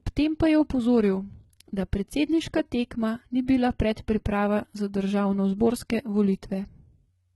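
From start to finish the speech carries a bright but artificial top end. Sibilants sound gritty and metallic, and nothing is present above about 11.8 kHz. This is likely HE-AAC compression with heavy damage, consistent with a very low bitrate around 16 kbps. The treble is rebuilt by copying lower bands upward rather than coded directly, so its harmonics fail to line up with those below. Plain low-pass filtering would sound dull instead of falsely bright.

At 3.46 s, just before "bila predpriprava za", a brief hiss of about 18 ms runs ahead of a sharp onset, and the attack itself sounds softened and smeared. This is pre-echo. The codec spread its quantisation noise across a whole transform block, so noise sized for the loud onset also filled the quiet moment before it. Unlike a click or dropout, the noise precedes the attack rather than interrupting it.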